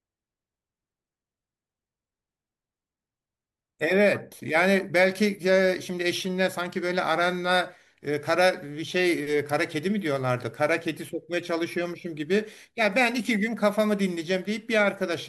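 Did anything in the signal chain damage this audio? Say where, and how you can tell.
No, nothing in the signal chain audibly damaged this speech recording, and no stage from capture to playback left a mark that can be heard.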